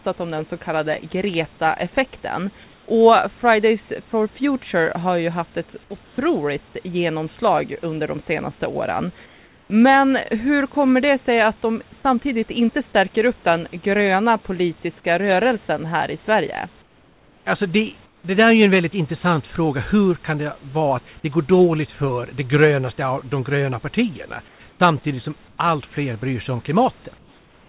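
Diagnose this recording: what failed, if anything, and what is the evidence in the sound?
Call processing: comfort noise replaces the background in pauses at 2.64–2.88, 6.04–6.18, 9.26–9.7, 16.82–17.46, 18.06–18.24, 24.48–24.8, 25.48–25.58 and 27.18 s to the end. The textured room noise gives way to smooth, featureless hiss, about 2 to 7 dB quieter. On a spectrogram these gaps are flat, even bands below the 4 kHz ceiling. The likely cause is discontinuous transmission, with the receiver synthesising noise.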